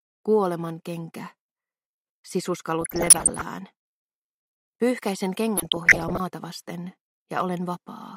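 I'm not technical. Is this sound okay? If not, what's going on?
No. Twice the sound breaks into DAB burbling, from 2.81 to 3.44 s and again from 5.57 to 6.20 s. It puts short blips of noise over the programme. Weak digital radio reception corrupted roughly one or two percent of the data, and the error correction could not repair all of it. Damaged pieces of the sound's frequency bands then get short blips of noise.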